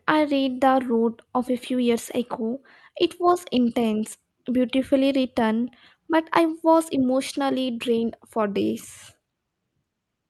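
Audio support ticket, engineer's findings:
No faults found in this speech.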